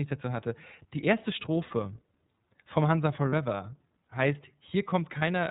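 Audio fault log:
throughout: iLBC codec. Speech is band-limited below 4 kHz with a rough, slightly synthetic texture, consistent with 30 ms frames at about 13.3 kbps.
1.67–1.71 s, 3.30–3.34 s, 5.19–5.23 s: lost iLBC frames. Each gap, about one 30 ms frame, is filled by a repeated pitch cycle mixed with noise, giving a brief buzzy held vowel before speech recovers immediately.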